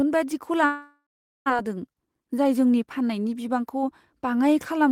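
A speech recording in which, from 0.65 s to 1.58 s, the sound breaks off and is replaced by a synthetic continuation of the last sound, a buzzy tail that fades out and leaves a stretch of near-silence of about 430 ms before the voice returns with a piece of speech missing. This is a long network dropout, most likely caused by packets failing to arrive. The receiver filled the gap for roughly 845 ms and about 780 ms of the original audio was never played. Then, from 2.07 s to 2.54 s, just before "जोंनि फाननायनि", the speech runs audibly faster, about 109% of normal speed, while keeping its pitch, so that stretch sounds hurried. That is a jitter buffer speed-up: after the backlog built up, the receiver trimmed short pitch-period-sized pieces in quick succession, removing roughly a twentieth of a second in total to bring the delay back down.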